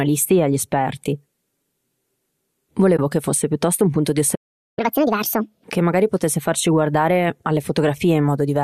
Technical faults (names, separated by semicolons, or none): AAC frame loss with muting; playback stall; catch-up at higher speed